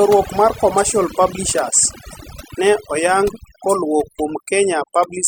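From start to finish the recording has overdone noise removal. The denoiser was set too hard, so every frequency band that sits close to its idea of the noise floor gets pushed way down or cut out, and the softer bits of the speech get thrown out along with the noise. That leaves the background lower and broken up into little twinkly specks.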